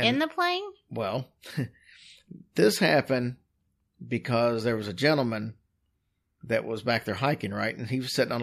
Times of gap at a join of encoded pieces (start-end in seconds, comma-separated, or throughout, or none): none